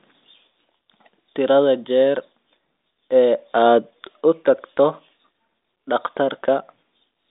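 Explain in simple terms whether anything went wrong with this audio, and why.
Nothing went wrong: the speech has passed through a G.726 ADPCM telephone link, which cuts everything above about 3.8 kHz and so sounds narrow like any phone call, and that is normal for the line rather than a fault.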